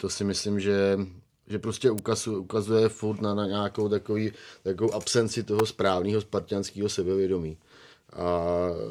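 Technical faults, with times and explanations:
1.98 s and 5.59 s, electrical switching spike: a sharp snap lands after "myslím že že prostě" and again after "nějakou takový takovou absenci", the second louder, peaking near -10 dBFS against about -15 dBFS. Likely a nearby switch or discharge arcing onto the line. Waveform shows needle-thin spikes; spectrogram, full-height vertical lines.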